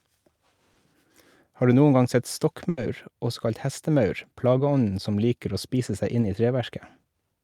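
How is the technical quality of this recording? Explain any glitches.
The recording has three packet-loss dropouts typical of a network call.

Short concealed packet loss hits at 0.73 to 0.77 s and at 6.21 to 6.25 s, just after "liker å spise seg". Each time about 20 ms of speech never arrived, and the receiver extended the preceding sound to cover the gap, leaving a brief smear or wobble.

A burst of packet loss occurs at 2.69 to 2.79 s, between "du noen gang sett" and "også kalt hestemaur plageånden". Roughly 80 ms went missing, and the decoder kept the last sound going while fading it. The result is a short held buzz or hiss, after which the speech resumes with that stretch lost.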